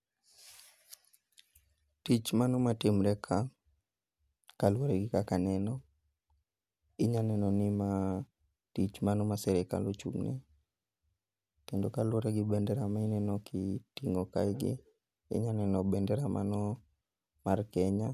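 Speech recording, with no audible technical faults anywhere.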